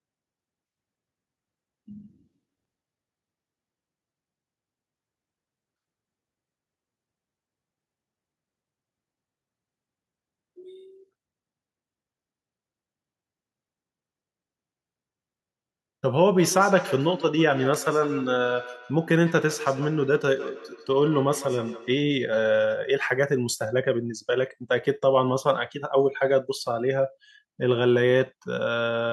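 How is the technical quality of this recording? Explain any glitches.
Feedback echo between two devices appears twice, faint at 2.03–2.39 s (about -47 dB below the speech) and strong at 16.39–22.1 s (about -13 dB). A second device in the room replays this microphone's signal, which is picked up again; each device's echo canceller removes only its own playback. Words return roughly every 150 ms, thinner and more ringing each pass.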